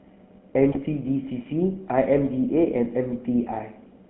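Speech runs through the GSM full-rate codec for the whole clip, and its damage is plainly audible. The line passes only about 150 Hz to 3.5 kHz, and the coarse pulse-driven excitation, which fits 13 kbps full rate, adds a buzzy, gravelly roughness. That grit is what separates it from simple band-limiting, which would only sound muffled. From 0.72 to 0.78 s, GSM bit errors break the sound into a brief squawk and gargle. Corrupted filter, pitch or gain values distort the spectrum and level across a stretch that fits about three 20 ms frames. Unlike a dropped packet, which leaves a gap or a smoothed-over fill, the decoder still plays garbled sound here.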